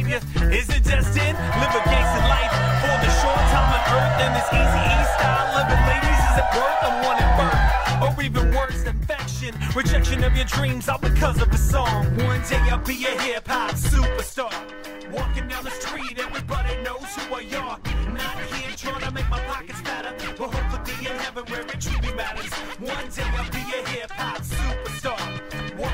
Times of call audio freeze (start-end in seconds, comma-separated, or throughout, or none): none